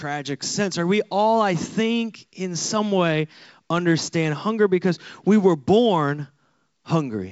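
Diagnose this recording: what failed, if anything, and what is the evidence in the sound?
Nothing in this recording failed.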